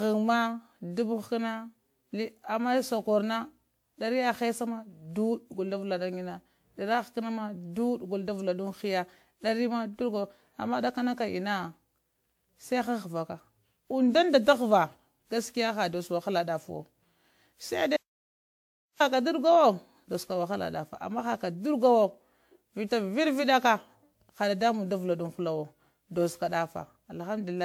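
Throughout the recording the speech has a swirling, hollow quality, with consonant attacks smeared and a watery noise that 128 kbit/s alone would not produce, even though content still reaches about 20.1 kHz. This is generation loss, most likely from the audio being decoded and re-encoded around ten times with a WMA-style codec. Each pass requantised the signal on a shifted frame grid, so the errors and spectral gaps piled up.

At 17.97 s the speech cuts off abruptly into dead silence with no room tone, then resumes mid-flow at 19.00 s, about 1.03 s later. This is an audio dropout to silence: the input feed was likely lost, and the recorder kept writing silence until the signal came back. Whatever was spoken during that second is gone rather than merely quiet.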